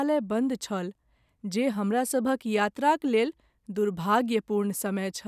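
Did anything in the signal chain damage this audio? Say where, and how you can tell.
No, nothing along the chain from capture to playback leaves an audible mark of damage on this speech.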